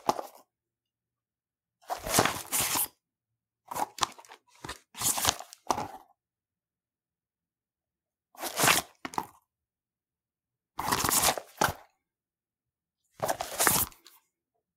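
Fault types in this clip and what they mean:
No technical faults are audible in these sounds, and the signal remains intact throughout.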